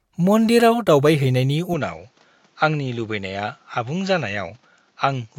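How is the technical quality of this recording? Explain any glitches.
The technical quality drops partway through. From 1.74 s, right after "मन्दिराव दावबायहैनायनि", the speech turns duller and a bit quieter, with nothing above 7.6 kHz, a faint new noise floor well below the voice, and no gap at the change. That points to a likely input switched to a poorer device, a narrower-band mic carrying its own tone and hiss through to the end.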